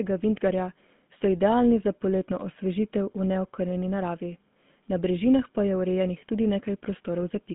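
From start to finish the speech has been through the GSM full-rate codec, the original mobile phone coder, and it sounds like it: the character fits its 13 kbps rate. The coder rebuilds the voice from a vocal-tract model fed by sparse, regularly spaced pulses, so you get that buzzy, gravelly roughness on every phrase. The band runs roughly 150 Hz to 3.6 kHz, with nothing at all above 3.8 kHz, so it's thin and muffled too.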